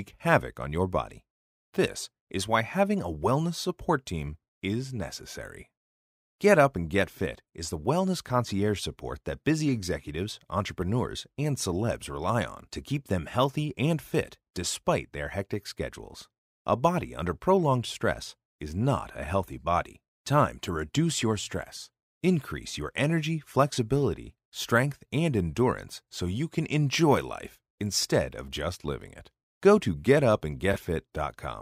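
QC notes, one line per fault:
30.73–30.77 s, corrupt frame concealed: one damaged AAC frame, 40 ms long, was masked by the decoder.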